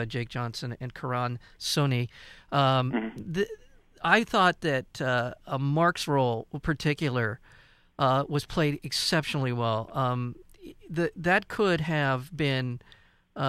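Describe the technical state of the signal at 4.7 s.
At 4.7 s the speech signal is intact, with no audible fault at that point.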